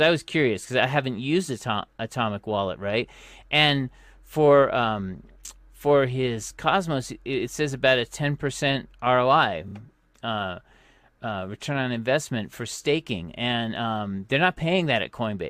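Speech with a repeated frames fault from 9.68 to 9.74 s: a 32 ms block plays twice more, adding 64 ms and producing a short stutter.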